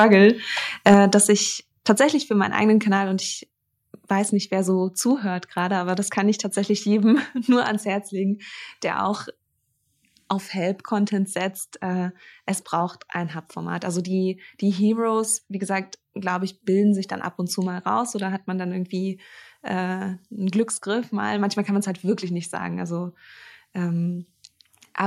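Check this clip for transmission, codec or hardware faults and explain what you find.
Two hardware-side faults are audible, both in the first two seconds.

Microphone overload occurs from 0.00 to 0.14 s and again from 0.86 to 0.94 s, just before "dass ich", with peaks likely pushed about 3 dB and then about 5 dB past the converter limit. A small share of samples is flattened at the converter limit, giving a harsh, crackling edge to those peaks.

The microphone volume then steps down twice: about 4 dB at 0.94 s, right after the second distorted peak and before "dass ich", and about 3 dB at 1.95 s, between "dass ich" and "für meinen eigenen". Voice and background drop together abruptly, which points to the call software likely cutting the device's input gain in response to the clipping.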